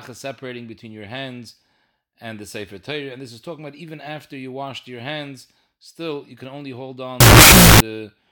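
At 7.20 s, just after "you can only hold", a wrong sample width fault begins and lasts until 7.80 s. The audio was stored with one sample size and played back as another. The sound suggests 16-bit data read as unsigned 8-bit values. Each stored sample splits into two, so the passage plays at half speed and drops an octave. Many values mix unrelated bytes. The result is loud, harsh noise with the speech faintly buried underneath.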